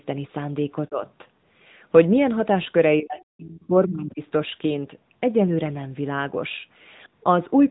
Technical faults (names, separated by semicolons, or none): AMR narrowband mobile codec; speech suppressed in double talk; other side's voice leaking through